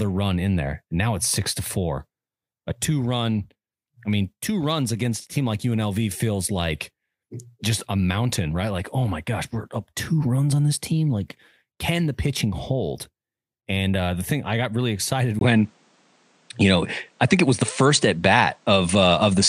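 At 15.39 s, after "i got really excited", the input likely switched to a poorer device: a 20 ms gap, then duller speech with nothing above 9.6 kHz.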